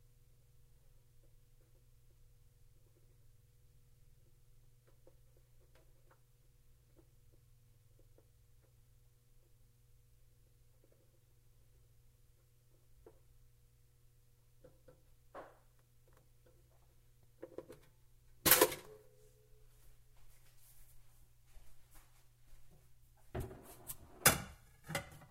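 Across this recording of everyday sounds, the signal shows no technical faults at any point.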